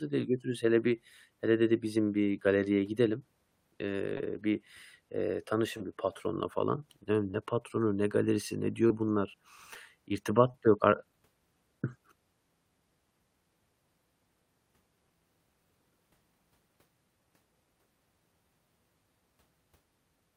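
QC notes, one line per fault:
4.17 to 10.51 s, short concealed packet loss at 4.17, 5.77, 7.31, 8.87, 9.74 and 10.51 s: each time about 20 ms of the speech stream arrived too late to decode, so the receiver extrapolated from the last good audio, carrying on its pitch or shaped noise for roughly 14 to 26 ms before crossfading back. Each event is a brief smear or wobble, and a short consonant there can drop out.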